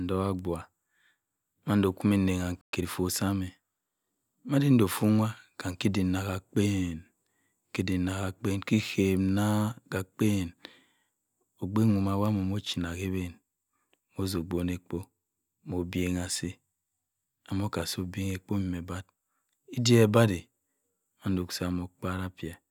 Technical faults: playback stall; time-compressed catch-up

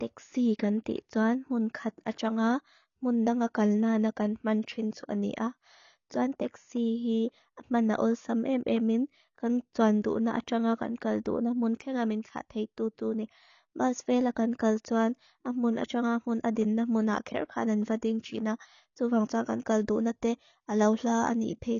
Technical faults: low-bitrate audio saved at a high bitrate

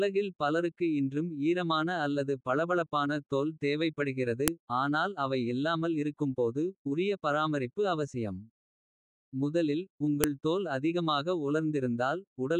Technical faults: file header played as audio

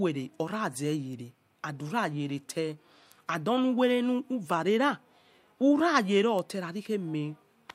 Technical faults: bit error spike

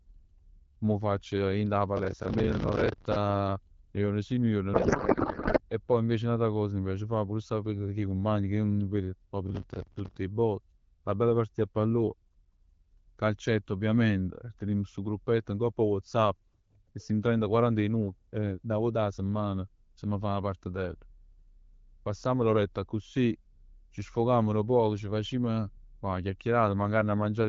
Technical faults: processor overload crackle; codec payload misread

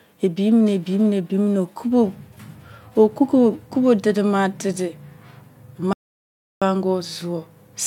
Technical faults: audio dropout to silence

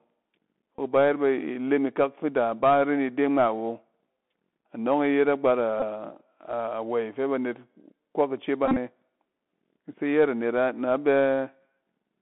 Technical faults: Bluetooth CVSD headset codec; Bluetooth headset packet repeated

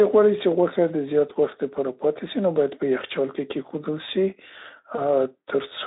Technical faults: VoIP packet loss concealed by the speech codec

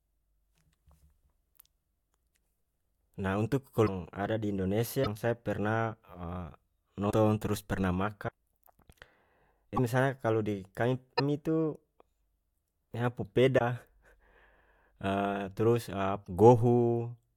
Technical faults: broken MP3 bit reservoir

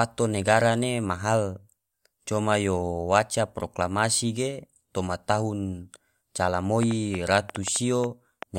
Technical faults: train of clicks

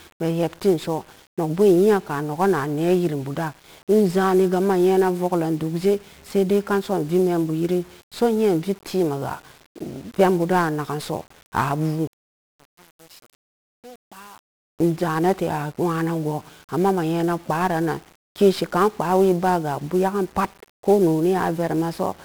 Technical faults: 1-bit DFPWM compression; one channel inverted

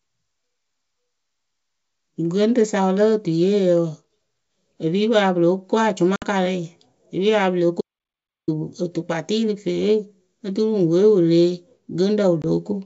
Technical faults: packet loss on an ADPCM call; audio dropout to silence

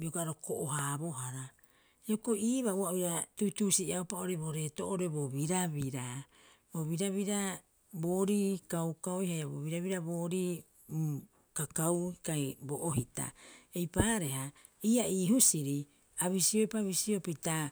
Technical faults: loud pop

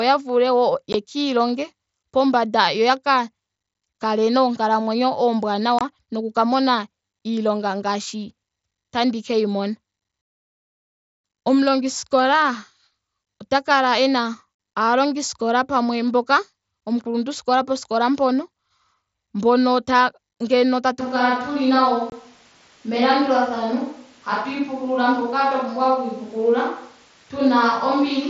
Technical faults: unconcealed Bluetooth headset packet loss; switch to a distant microphone

